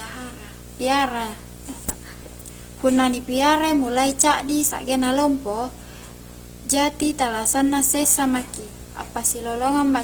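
A steady buzz with a fizzy hash riding on it sits under the speech for the whole clip, roughly 20 dB below it. It is video or display buzz: a screen or video cable is coupling its 60 Hz field-rate interference into the audio path.

Throughout, the speech also sounds rough and grainy, with tonal parts turned noisy rather than swirly, even though the bandwidth stays full, reaching about 20.1 kHz. This plainly audible damage is likely Opus compression in its CELT music mode, consistent with a low bitrate near 16 kbps.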